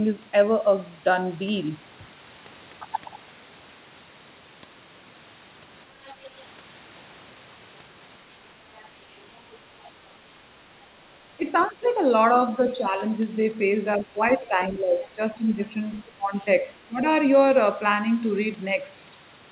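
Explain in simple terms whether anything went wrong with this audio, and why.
Two problems can be heard, both typical of a hands-free call.

The first is the other side's voice leaking through. A faint second voice appears underneath the talker at 6.05 to 6.25 s, 8.76 to 9.41 s, 11.59 to 11.9 s and briefly at 15.95 to 16.01 s. It is quiet throughout and barely there at the last point. The likely cause is the far end's audio playing from the loudspeaker and reaching the microphone, where the echo canceller failed to remove all of it.

The second is the talker's speech suppressed in double talk. Between 11.37 and 12.96 s the voice dips for a little under half a second in total, and at its worst it falls away sharply. Between 13.98 and 17.03 s it dips again, more gently but for about a second and a half altogether. Both sides were likely talking at once, so the echo canceller could not separate the talker from the echo and turned everything down.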